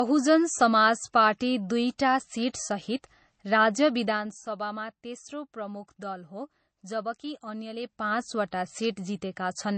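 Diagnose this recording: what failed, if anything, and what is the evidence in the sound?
The failure is at the codec stage. Nothing is present above 8.3 kHz, and the speech carries the swirling, smeared MP3 artefacts of a very low bitrate throughout. Yet the file's large size points to a high-bitrate encode. This is a low-bitrate MP3 saved at a high bitrate, likely a 32 kbit/s MP3 re-encoded at 256 kbit/s. The second encode kept the first one's cut-off and artefacts and restored nothing. A single lowpass filter would remove the top band cleanly, without this codec texture, which is what tells the two apart.

Zipper noise comes from a gain stage, such as a driver, buffer or playback level control, that applies level changes in unsmoothed steps. From 4.04 to 4.40 s the level falls by about 10 dB in 2 dB steps, at around 20 steps per second. From 7.73 to 8.22 s, right after "प्रमुख दल हो जबकि", it rises by about 10 dB in 2 dB steps, at roughly 15 per second. 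Random clicks or dropouts would not follow this pattern. These ticks are regular and appear only while the level is moving.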